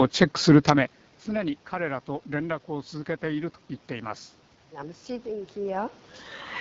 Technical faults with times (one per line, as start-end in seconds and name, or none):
0.00-6.61 AMR wideband (HD Voice) codec